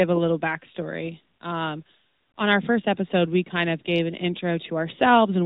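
Speech passed through an AMR narrowband mobile codec for its whole length: nothing above 4 kHz survives, and the plainly audible buzzy, synthetic edge, unlike a simple low-pass filter's clean dullness, fits a roughly 10 kbps AMR-NB mode.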